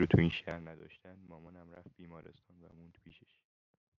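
Zipper noise runs from 0.3 to 0.77 s. The level falls by about 25 dB in 1 dB unsmoothed steps, roughly a hundred per second, and each step clicks into a buzzy zip over the speech.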